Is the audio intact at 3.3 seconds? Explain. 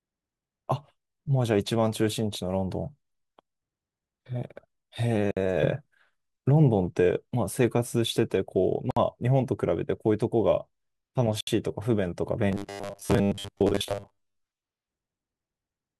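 No, at 3.3 seconds the audio is affected by sample clock jitter, which runs through the whole clip. The converter's clock wanders by something on the order of a microsecond, so each sample is captured a little early or late. Where the speech waveform changes fastest, that timing slip becomes an amplitude error about 40 dB below the signal. It is heard as a faint hiss or grit riding on louder and brighter sounds, disappearing in pauses.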